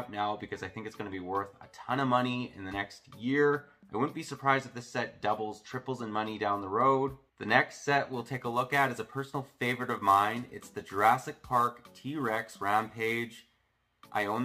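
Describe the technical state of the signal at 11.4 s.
At 11.4 s the signal carries sample clock jitter, present from 8.13 s to the end. The converter's clock wobbles by roughly 10 microseconds. Steep, loud waveform sections pick up a rough hiss, about 25 dB below the signal.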